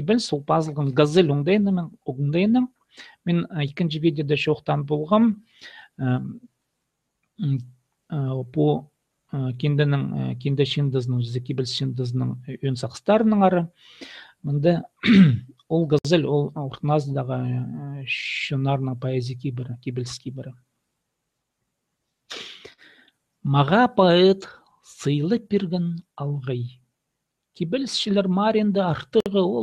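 At 15.99 s and again at 29.20 s, a gap at a join of encoded pieces cuts in: about 61 ms and 55 ms long, left by encoder start delay and last-frame padding. Unlike a dropout, nothing is lost; the sound resumes exactly where it stopped.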